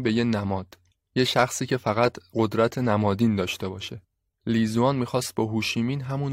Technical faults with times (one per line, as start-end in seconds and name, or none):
2.32 damaged data in a compressed stream